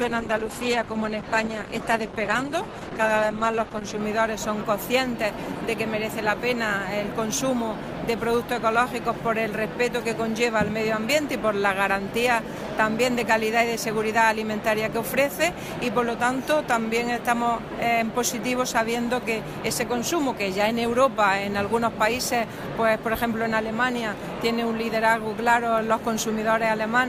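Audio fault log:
0.00–4.00 s, adaptive stream starting at a low bitrate: the opening seconds sound dull and smeared, with nothing above 12 kHz and a papery, watery coding texture, then at 4.0 s the sound abruptly gains clarity and air with no gap or dropout. The player likely began on a cheap rendition to start quickly. The artefacts point to Opus at around 12 kbit/s, and the later sound fits a step up to about 64 kbit/s once the connection had been measured.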